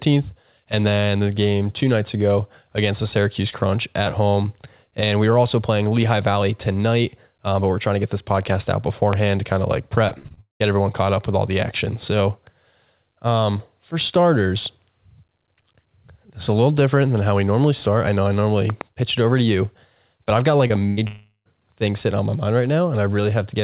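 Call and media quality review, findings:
Loud pop, 9.13–9.15 s: single sharp pop roughly 15 dB above the speech, which carries on underneath. Likely a voltage step from a plug, switch or static discharge reaching the input, shaped into a brief pulse by the downstream circuitry.

Loud pop, 18.70–18.83 s: two pops in quick succession, roughly 10 dB above the speech. Same signature, a likely electrical transient on the capture side, while the speech carries on underneath.

Repeated packet loss (robotic sound), 10.08–10.62 s: five gaps, longest 192 ms, about 320 ms missing, nearly 60% of the span synthesised. Jitter buffer keeps extending the last waveform, so speech turns choppy with pieces gone.

Short concealed packet loss, 20.68–20.72 s: about 20 ms never decoded. Receiver bridged it by continuing the preceding sound, then cross-faded back into real audio. Heard as a momentary smear or wobble in the speech.

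Burst of packet loss, 20.88–20.99 s: about 100 ms of consecutive packets lost. Concealment stretches the last sound and fades it, giving a held buzz or fading hiss, then speech resumes past the missing section.

Long network dropout, 21.07–21.47 s: about 380 ms missing. Concealment buzz decays to 130 ms of silence before audio returns further along. Likely a transient network outage. The G.711 mu-law path's band limit, nothing above 4 kHz, holds throughout.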